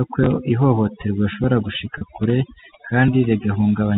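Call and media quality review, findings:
Overdone noise removal, entire clip: background near-silent with twinkling specks. Noise suppressor set too aggressively, zeroing bands near its noise estimate and taking quiet speech detail too. Spectrogram: isolated flickering dots between words, ragged harmonic edges.

Feedback whistle, 1.73 s to end, starting just after "ko ihohoterwa rishobora": steady thin tone at 6.2 kHz, about 15 dB below the speech, level wavering slightly. Likely cause: speaker-to-mic loop held just short of runaway. Spectrogram: one persistent horizontal line.

Packet loss with pitch repetition, 1.98–2.01 s: 30 ms gap, consistent with a single lost packet, concealed by repeating the last pitch period, heard as a brief held, buzzy note. Waveform: identical repeated cycles, then a short cross-fade back into speech. The G.711 A-law telephone band underneath carries the speech.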